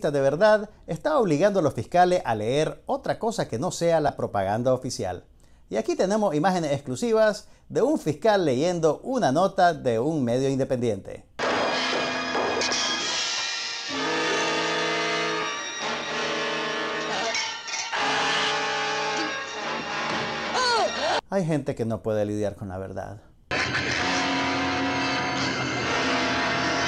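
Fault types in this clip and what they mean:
Lost LE Audio frames: three brief, grainy blips, at 4.08, 15.42 and 25.95 s, where the sound loses its definition and any tonal content smears into noise for about 10 ms before snapping back. Each gap fits a single dropped frame on the Bluetooth LE Audio link. The LC3 decoder covers the hole by replaying the previous frame's spectrum with randomised signs, which keeps the level but scrambles the detail.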